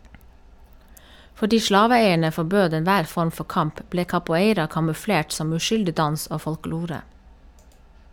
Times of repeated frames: none

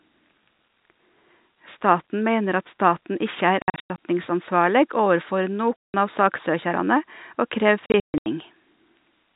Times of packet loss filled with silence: 3.62-3.97, 5.82-5.94, 7.87-8.26

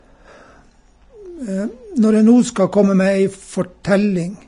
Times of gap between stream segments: none

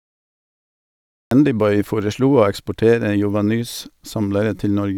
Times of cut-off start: 0.00-1.31

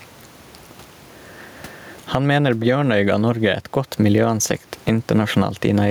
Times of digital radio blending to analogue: none

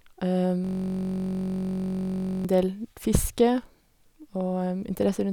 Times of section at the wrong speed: none

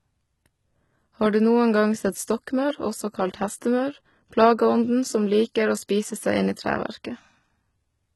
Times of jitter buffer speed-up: none

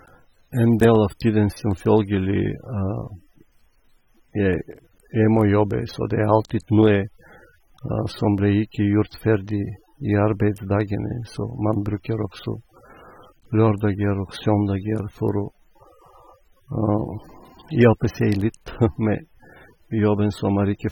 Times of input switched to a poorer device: none

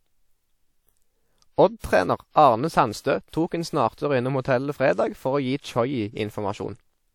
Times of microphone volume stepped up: none

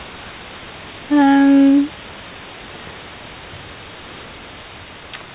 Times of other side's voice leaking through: none

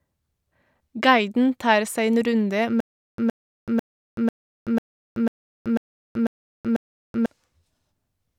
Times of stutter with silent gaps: 2.80-7.26

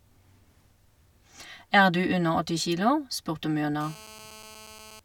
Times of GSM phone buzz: 3.81-5.00

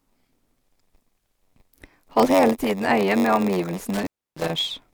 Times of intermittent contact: 3.94-4.50

